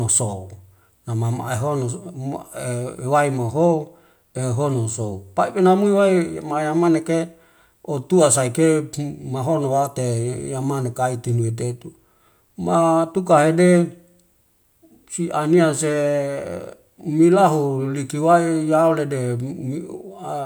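No faults detected anywhere in the speech recording.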